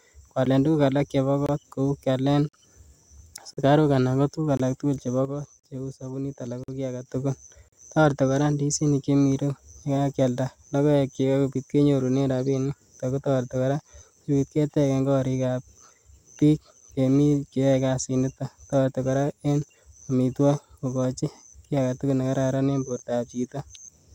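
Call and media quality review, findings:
Gap between stream segments, at 0.45, 1.46–1.49 s (after "alak chebo"), 2.49–2.53, 3.53–3.57, 4.57–4.60, 5.60–5.64, 6.64–6.68, and 7.68–7.73 s (before "toreti koraa"). Hard-edged silent holes of 10 to 48 ms, roughly once a second, which fits 1 s segments whose timestamps leave gaps filled with silence.

Sudden gain jump, 5.25–7.06 s, after "ko tuguk alaktugul chebo". Speech and background drop together by about 7 dB, then return, likely a digital gain change applied without a ramp.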